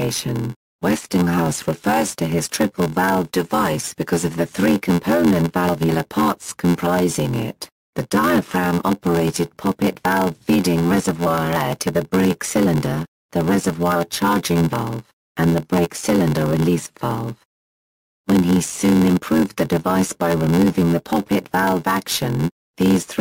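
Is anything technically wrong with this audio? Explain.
Yes. Throughout the clip there is a block size mismatch (padded). One stage delivers shorter blocks than the next stage reads, which fits a 512-sample read, and the shortfall in each block is filled with silence. Those regular tiny gaps produce a buzz at about 86.1 Hz, and the audio runs at 0.861 times normal speed. Unlike a slowed playback rate, the pitch stays about normal. Only the timing stretches.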